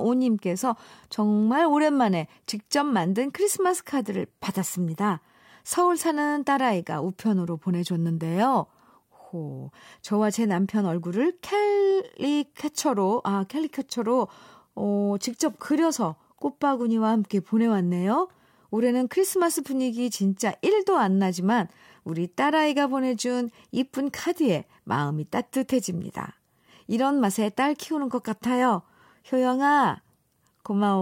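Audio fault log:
0.13–31.01 s clock slip clicks: a soft rattle of ticks about every 70 ms, likely from unsynchronised clocks slipping one sample; thin vertical spectrogram lines and tiny waveform steps.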